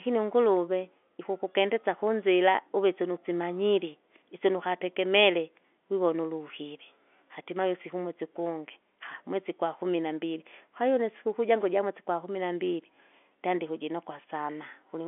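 No technical faults are present: the speech comes through a standard telephone channel, with the narrow line band of roughly 250 Hz to 3.5 kHz and the faint level-following hiss typical of G.711 telephone coding.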